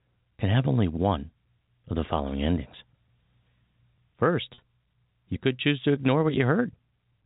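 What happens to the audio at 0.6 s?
Nothing goes wrong at 0.6 s: the speech carries on intact, with only the narrow telephone-band sound of G.711 coding that runs through the whole clip.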